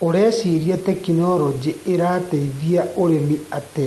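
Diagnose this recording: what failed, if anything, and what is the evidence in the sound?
Nothing stood out on listening, as the speech comes over the call path and above the low background noise of the room with no audible failure at any stage.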